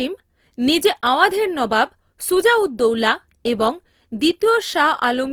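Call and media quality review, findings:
Opus compression, whole clip, 0 to 5.3 s. Speech sounds rough and grainy, with noisy texture on voiced sounds. Likely cause: Opus encoder in CELT music mode at a low rate, fitting about 24 kbps. Bands are kept filled with folded or noise content instead of left empty. Bandwidth is not narrowed, with content reaching about 20.4 kHz.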